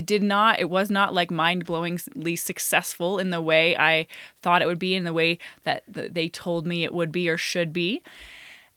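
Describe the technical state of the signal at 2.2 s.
At 2.2 s the signal is intact, with no audible technical fault.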